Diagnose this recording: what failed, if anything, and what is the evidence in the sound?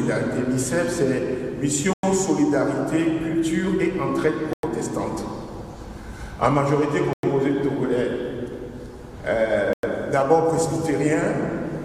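Hard-edged 100 ms silences cut into the sound at 1.93, 4.53, 7.13 and 9.73 s, recurring every 2.6 s. This is a gap between chunks at the playback or storage stage. The audio was handled in 2.5 s blocks, with silence inserted at each join.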